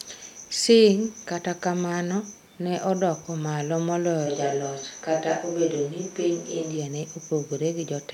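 A speech clip where, from 4.28 to 6.76 s, the voice turns suddenly roomy and thin at about the same level, likely a switch to a distant microphone, with faint room noise.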